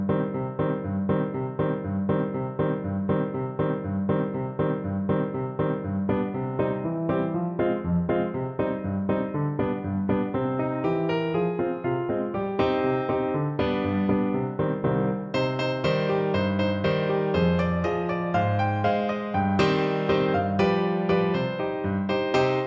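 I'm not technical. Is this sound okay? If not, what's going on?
Yes, no faults are audible.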